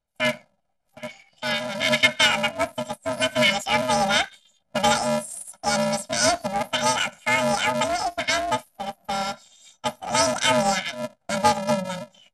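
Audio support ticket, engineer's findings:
Robotic buzz on the speech, start to end. Planar audio read as interleaved: each 2.67 ms block, which fits 128 samples, plays left half then right half at double speed. Buzz sits at the 375 Hz block rate, no octave jump. Check deinterleave stage.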